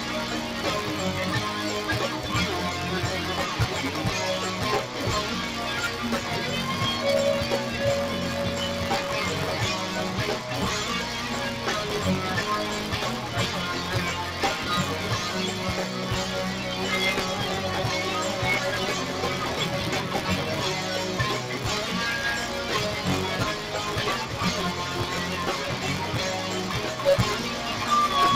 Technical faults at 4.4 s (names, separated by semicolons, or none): noise suppressor applied to music or sounds; buffer tearing